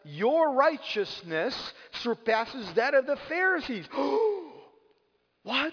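Aliasing runs through the whole clip: content above 5.5 kHz was not filtered before a rate reduction, which fits a drop to about 11 kHz, so it folds back as gritty, metallic tones roughly 20 dB down. Unlike plain band-limiting, which sounds dull, energy crowds right up to the band edge.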